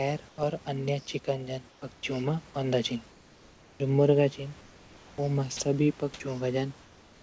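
Speech over a call link with nothing above 8 kHz, in which comfort noise replaces the background at 0.29–0.38, 1.70–1.82, 1.94–2.03, 3.11–3.80, 4.61–5.18 and 6.83–7.22 s. In these pauses the room's real texture turns into flat, featureless hiss about 2–3 dB quieter, likely from discontinuous transmission. The speech itself is untouched there, which separates it from a dropout. Separately, at 5.57–5.60 s, 30 ms of speech is dropped by the voice detector and replaced by that same steady noise, likely because the detector mistook a quiet moment of speech for background.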